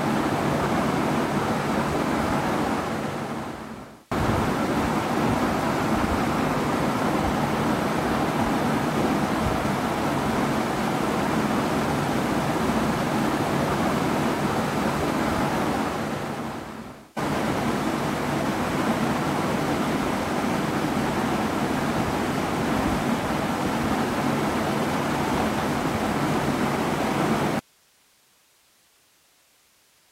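At 27.59 s the audio drops out abruptly and does not return before the end, leaving only hiss about 35 dB below the signal level. This is an audio dropout to a faint residue: the wanted signal was likely lost upstream while the rest of the chain stayed live, so the background noise carries on. That sudden cut to steady hiss sets it apart from a fade-out or a natural pause, where the level tapers or silence follows the content.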